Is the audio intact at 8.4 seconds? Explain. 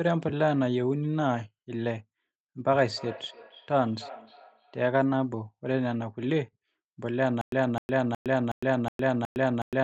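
No. From 7.41 s to the end, the speech falls into a stutter with silent gaps: a 258 ms fragment repeats six times, each followed by about 110 ms of digital silence, every 367 ms, likely a stalled stream replaying its last buffer. On a waveform or spectrogram the identical blocks alternate with flat, empty gaps.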